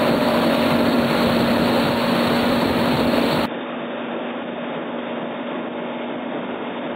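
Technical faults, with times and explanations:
3.46 s to the end, input switched to a poorer device: with no gap, the sound abruptly turns dull and boxy, losing everything above 3.7 kHz, drops roughly 10 dB in level and gains faint new background noise, likely from recording moving to a narrower-band microphone.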